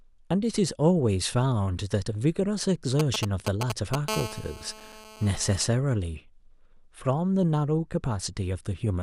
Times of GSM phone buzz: 4.09-5.64

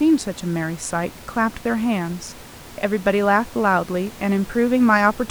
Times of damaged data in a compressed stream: none

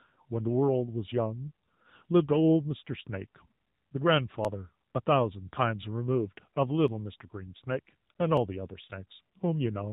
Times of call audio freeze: none

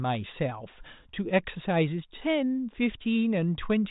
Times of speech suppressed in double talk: none

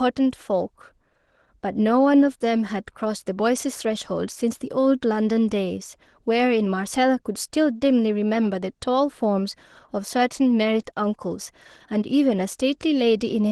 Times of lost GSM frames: none

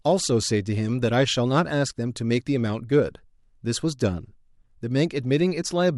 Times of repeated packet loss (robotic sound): none

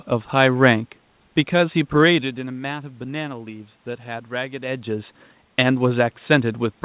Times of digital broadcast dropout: none

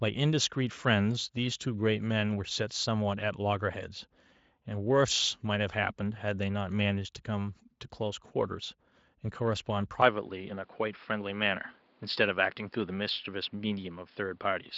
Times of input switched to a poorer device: 10.02-14.78

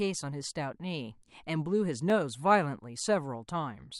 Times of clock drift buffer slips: 0.20-3.05

